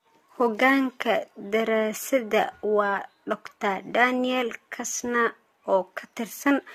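From start to end the speech sounds swirly, hollow and smeared, with softened consonant attacks, the mark of generation loss, likely from about five AAC-LC passes near 64 kbit/s. A spectrogram shows patchy holes and blurred onsets across the upper bands.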